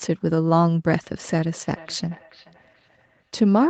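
From 1.51 s to 3.43 s the speech picks up a feedback echo between two devices. A second device in the same room plays the call back out loud, and this microphone catches it again. The local echo canceller only removes its own playback, so the copy gets through. Each phrase returns roughly every 400 ms. The repeats are thin and ringing. They sit about 25 dB below the speech at their loudest. The whole clip has the narrow sound of a call path that stops at 8 kHz.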